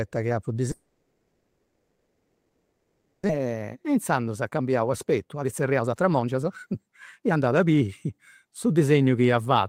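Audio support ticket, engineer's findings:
Long network dropout, 0.71 to 3.31 s, right after "chi apu". Likely a receive-side stall: nothing arrived, so concealment stretched the last sound into a fading buzz, then a short quiet gap of about 0.25 s. Roughly 1.5 s of audio is simply gone when sound resumes, with latency jumping by around a second.

Jitter buffer speed-up, 3.38 to 8.95 s. Playback runs at 118% with pitch unchanged, so it sounds rushed. The buffer was clearing that built-up backlog by repeatedly snipping out pitch-period-sized slices, about a second's worth in total, until it got back to its target depth.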